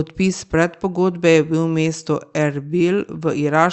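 Nothing in this speech audio stands out as a fault.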